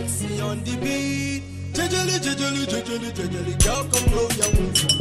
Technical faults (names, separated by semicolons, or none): MP2 compression